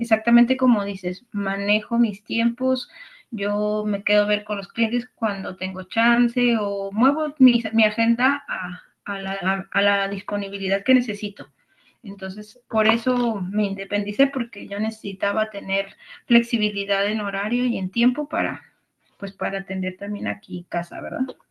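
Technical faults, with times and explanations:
No technical faults are heard.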